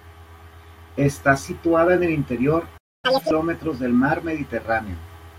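At 2.77 s, right after "situada en el interior", the speech cuts out in a playback stall. Silence lasts about 0.26 s, until 3.05 s. The player likely ran short of data or was briefly blocked. Then the sound resumes where it stopped.

From 3.05 to 3.31 s comes catch-up at higher speed. The player works through its backlog at double speed. Pitch jumps by about ten semitones, giving a brief chipmunk quality. Normal speed and pitch return just before "del mar".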